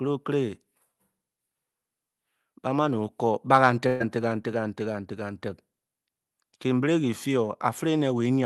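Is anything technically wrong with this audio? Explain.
Yes. From 3.87 to 4.02 s, just after "kur ba kan", there is a burst of packet loss. About 120 ms of audio went missing, and the receiver stretched and faded the last sound to fill it. You hear a smeared buzz, not silence, which separates it from a plain dropout.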